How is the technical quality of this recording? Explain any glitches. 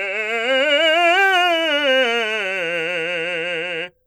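The recording is noticeably degraded throughout by compression damage.

From start to finish the music has a watery, swirling quality, with metallic chirps on cymbals and smeared attacks, likely from MP3 compression at a low bitrate, which fits roughly 64 kbps. Short of bits, the encoder drops weak spectral lines that flicker in and out between frames. A spectrogram shows speckled, patchy gaps, and the waveform shows softened transients.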